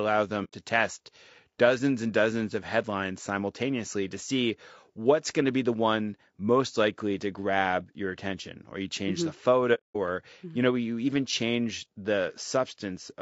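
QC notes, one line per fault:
throughout: low-delay AAC compression. Grainy, rough sound with noise between smeared harmonics and a thin top band, likely AAC-ELD near 32 kbps. Spectrogram shows blurred harmonic lines.
0.44–0.54 s and 9.74–9.97 s: AAC frame loss with muting. Lost frames decoded as silence, fading out and in. Blank spectrogram columns and tapered flat waveform gaps. The first gap falls before "test dozens and dozens".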